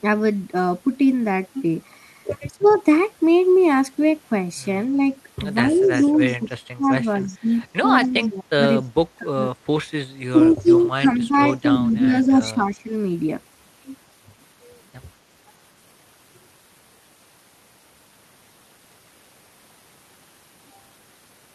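Speech suppressed in double talk at 2.52–2.64 s, dipping by about 20 dB, is likely an echo canceller that mistook the overlap of both talkers for its own echo and pulled the voice down. Echo leak follows at 2.61–2.74 s: a faint copy of the speech, about 25 dB below it and 251 ms late, likely slips back through the loudspeaker path. Suppression returns at 4.90–5.01 s (about 5 dB) and hits hardest across 5.67–9.4 s, with the voice dropping by up to about 25 dB for roughly 1.5 s in all. Meanwhile the 251 ms echo leaks again at 5.75–7.37 s (about 20 dB down) and 8.03–8.28 s (about 30 dB down). Across 10.3–12.92 s the voice dips by about 10 dB, and a brief echo scrap sounds at 11.52–11.56 s.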